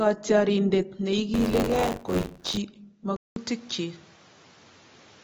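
A speech recording whose encoding was likely squeezed through AAC compression at a low bitrate, consistent with AAC-LC at around 24 kbps. The encoder lowered the cut-off and coded the remaining spectrum coarsely, so the whole clip sounds dull and smeared, with a plainly audible warbling, fizzy texture on sustained sounds and sibilants. From 1.33 s to 2.58 s the playback and capture pointers in a ring buffer drift into each other, producing buffer tearing. Inside every period roughly a fifth of the buffer carries audio from about 40 ms earlier, spliced in with hard joins on both sides. The result is a rattling, robotic buzz at 93.8 Hz, a rate that fits a 512-sample buffer at 48 kHz, and it sounds only while the speech is present. At 3.16 s the recording system appears to have changed its input to a poorer device. The likely cause is a switch to another microphone or a headset call profile. 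A 200 ms silence marks the switch. From there to the end the band is narrower, giving a boxier tone, and a new background noise floor sits roughly 30 dB below the speech. The loudness stays about the same across the change.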